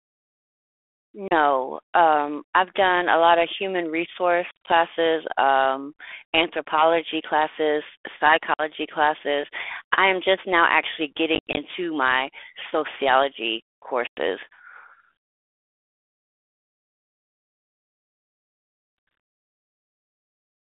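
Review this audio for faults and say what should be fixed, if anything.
Packet loss on an ADPCM call cuts hard-edged silent gaps at 1.28, 4.51 (130 ms scattered over 160 ms), 8.54, 11.35 (130 ms over 220 ms) and 14.07 s, from 30 to 130 ms long. Unlike a plain dropout, the speech resumes slightly distorted for some tens of milliseconds while the 32 kbit/s G.726 decoder's predictor and step size resynchronise. Adding packet-loss concealment and a jitter buffer, or resetting the decoder state cleanly after a loss, would prevent this.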